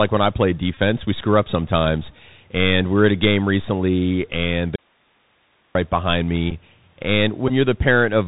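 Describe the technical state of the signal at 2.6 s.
At 2.6 s the speech carries the Bluetooth CVSD headset codec, present throughout. Its one-bit, adaptive-step coding cuts everything above 4 kHz, roughening s sounds over a granular hiss.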